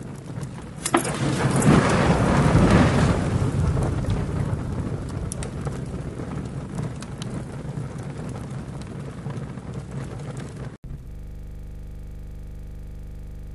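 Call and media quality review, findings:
Input likely switched to a poorer device, 0.0 to 10.84 s: dull, band-limited sound with nothing above 11.4 kHz and a faint added noise floor, with no noticeable level jump. An 80 ms silence at 10.84 s marks the switch back, after which the full band returns.

System hang loop, 11.11 s to end: one 40 ms slice of audio repeats exactly at 25 Hz, heard as a steady buzz. The driver or host stalled while the hardware kept replaying its ring buffer, which fits a buffer of about 40 ms.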